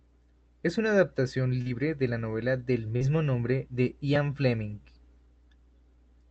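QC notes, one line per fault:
1.61–1.69 s and 2.96–3.02 s, short concealed packet loss: about 40 ms missing after "una adaptación" and "de la novela del", filled by stretching the preceding sound, so brief smeary wobbles.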